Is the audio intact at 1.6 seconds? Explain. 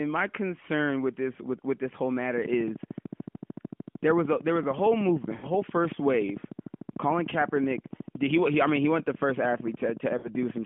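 Yes, at 1.6 seconds the speech is intact, with no fault at that moment, only the steady narrowband sound of an AMR narrowband mobile codec path at 12.2 kbps.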